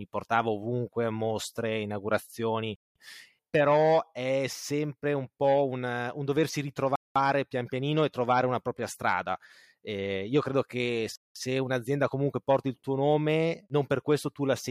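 The speech was delivered in 4-second chunks with 200 ms of silence inserted at each join, a gap between chunks. The sound drops out at 2.76, 6.96 and 11.16 seconds, each hole lasting 0.2 s.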